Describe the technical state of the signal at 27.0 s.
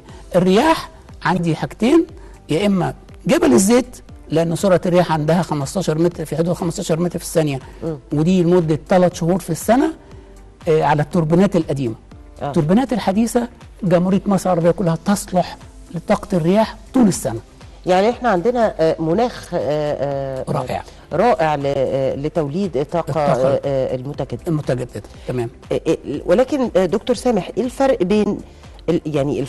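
At 27.0 s the signal is intact, with no audible technical fault at that moment.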